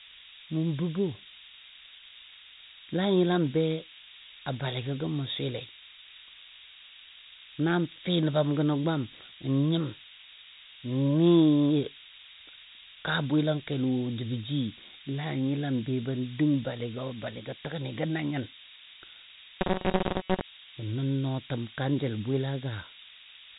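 From the start to the end of the speech, a steady, thin hiss sits under everything. It is low bit depth with noise shaping. The signal is carried on only 4 bits, so each sample is rounded coarsely. That rounding error is pushed upward in frequency rather than spread evenly. The hiss therefore climbs toward the top of the band. It sits only about 10 dB below the speech. The G.726 link cuts off everything above about 3.8 kHz.

From 19.61 to 20.45 s, the speech turns into a rigid, metallic buzz. It still tracks the rough shape of the words. The buzz sits at 188 Hz. This is robotic sound from repeated short buffers, likely caused by fresh audio arriving too rarely. The gaps are filled by looping the last fragment, about 5.3 ms long. Most of the real audio in this stretch is skipped. The fixed repeat rate is what imposes the buzz.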